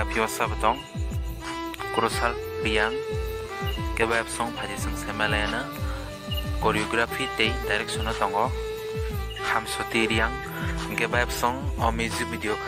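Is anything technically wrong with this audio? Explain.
Yes. Mains buzz from 3.12 to 9.25 s: switching spikes twice per 60 Hz cycle add harmonics into the kilohertz range, a steady raspy buzz roughly 25 dB under the sound.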